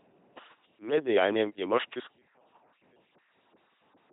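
From the first moment the speech has the buzzing, mechanical robot quality of an LPC-10 vocoder, and the damage is heavy. Each instant is rebuilt either from a pulse train or from noise through a small all-pole filter, so voiced stretches buzz and wrong voicing choices turn into hiss. Nothing comes through above 3.8 kHz. That sets it apart from a merely narrowband or muffled line, and the sound fits a 2.4 kbit/s LPC-10 vocoder.

At 2.13 s, right after "dejanjem je moški", the level drops by about 34 dB and stays down to the end. What remains is a faint residue rather than the full vocoded voice. This is likely one channel inverted, with the two channels cancelling when summed to mono. A dropout or mute would leave true silence, and a gain drop would keep the same tone. Here the centred material vanishes and only a difference signal survives.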